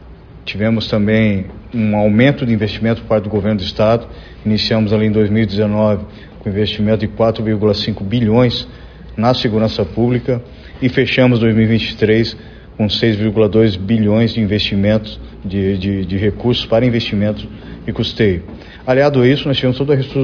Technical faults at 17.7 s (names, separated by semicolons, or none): none